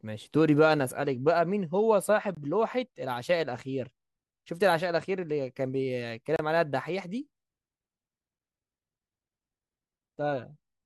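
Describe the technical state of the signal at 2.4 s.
A gap between stream segments sits at 2.35 to 2.37 s, where two segments' timestamps fail to meet and the player pads the hole with about 20 ms of silence, which fits a 2-second segment boundary. The speech cuts out abruptly with hard edges, then resumes with nothing lost.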